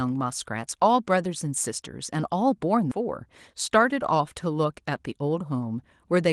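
A skip ahead occurs at 2.91 s. Audio was already queued behind the missing portion, so the receiver discarded a stretch, either lost in transit or thrown out when the jitter buffer overflowed, and joined the two sides almost directly. Around 0.7 s of speech is gone, and the jump takes only about 0.1 s, with no silence or filler. The sentence lurches forward abruptly, and the delay shrinks by roughly the same amount as the missing stretch.

A jitter buffer speed-up runs from 3.70 to 4.36 s. The buffer was still holding more audio than its target, so the receiver repeatedly cut out short slices, each one or a few pitch periods long, removing around 70 ms altogether. Playback runs at about 109% speed while the pitch stays unchanged. The speech sounds hurried through that span, with the band-limited Opus coding, which tops out near 12 kHz, present throughout.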